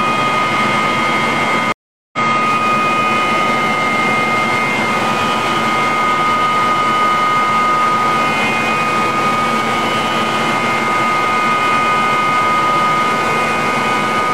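At 1.72 s there's a stream reconnect: the connection dropped, the player sat silent for about 0.41 s until 2.19 s, then started a fresh decoder. The sound picks up roughly four tenths of a second further on, so that stretch is simply skipped.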